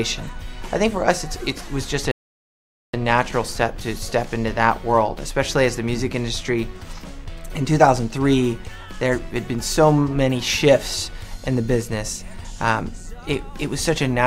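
At 2.11 s a rebuffering stall occurs: playback runs out of downloaded audio, falls silent for 0.82 s, then resumes exactly where it stopped at 2.94 s.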